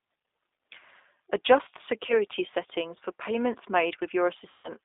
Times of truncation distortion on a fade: none

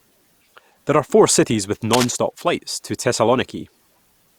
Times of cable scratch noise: 1.91-2.10

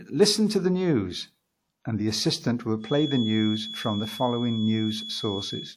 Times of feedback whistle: 2.78-5.77

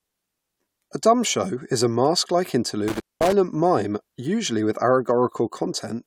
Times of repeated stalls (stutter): none

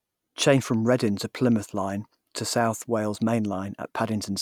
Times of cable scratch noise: none

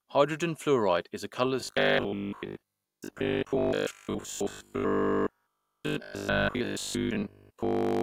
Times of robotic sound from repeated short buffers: 1.61-8.03

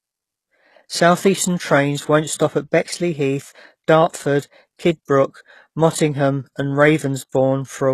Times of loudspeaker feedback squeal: none

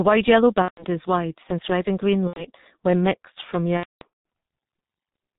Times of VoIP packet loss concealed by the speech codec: 0.62-0.84, 2.27-2.46, 3.77-4.04

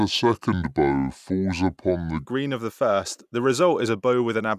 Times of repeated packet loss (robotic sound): none

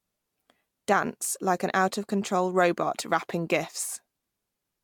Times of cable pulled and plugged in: none

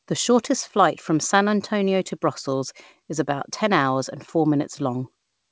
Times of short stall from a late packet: 0.67-0.71

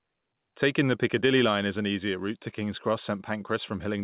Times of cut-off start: none

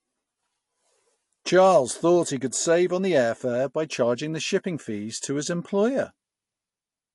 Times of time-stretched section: none

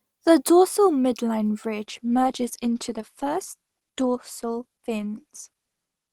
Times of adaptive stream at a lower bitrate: 1.84-6.13

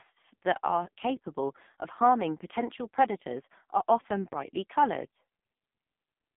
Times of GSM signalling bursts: none

